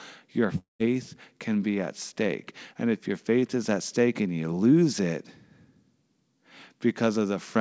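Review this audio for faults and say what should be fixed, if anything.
At 0.58 to 0.81 s the speech drops out. The last sound is drawn out into a fading buzz or hiss, then about 150 ms of silence, and it comes back with 220 ms missing. That's likely a long network dropout, with the receiver covering the gap. To prevent it, stabilise the network link or add redundancy such as FEC so lost packets can be recovered. The G.722 path at 64 kbps leaves nothing above 8 kHz.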